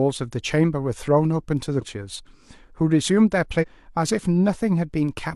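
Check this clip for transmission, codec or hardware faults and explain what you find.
Two instances of compressed frames skipped, at 1.77–1.83 s and 3.58–3.65 s. Whole 46.4 ms frames go missing, so the speech jumps ahead, by roughly a fifth and then about 0.4 of a second.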